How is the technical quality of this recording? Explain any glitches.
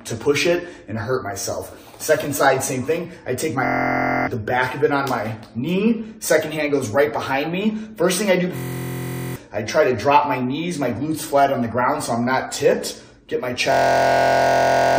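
Three system hang loops break this up, at 3.65 to 4.27 s, 8.57 to 9.36 s and 13.72 to 14.98 s. Each time the system stalled while the hardware kept replaying one 23 ms chunk, which fits a 1024-sample buffer. That makes a steady 43 Hz buzz, and around 0.7 s of audio goes missing in the first two, closer to 1.5 s in the last.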